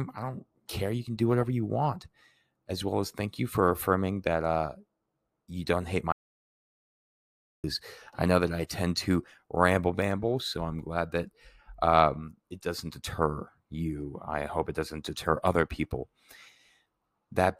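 At 6.12 s, just after "you don't hate", the speech drops out to total silence with no room tone until 7.64 s, when it returns at "I know that I". This audio dropout to silence loses about 1.5 s, likely through an interrupted input while silence was written.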